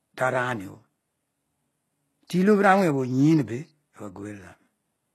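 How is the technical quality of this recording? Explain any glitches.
The recording shows plainly audible codec damage across the whole clip, likely from HE-AAC compression. Only the lower spectrum is coded; the treble is rebuilt by copying lower bands upward, so s sounds turn gritty and lispy. Nothing exists above 12.3 kHz, which fits a very low bitrate around 16 kbps.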